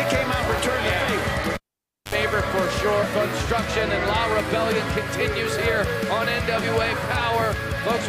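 A live cable was pulled and plugged in at 1.54 s: a pop, 0.55 s of near silence, a 64 ms burst of 50 Hz mains buzz, then another pop at 2.15 s.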